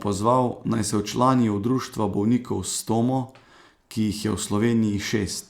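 No technical faults can be heard anywhere in the recording. Nothing in the chain that carried the audio draws attention to itself at any point.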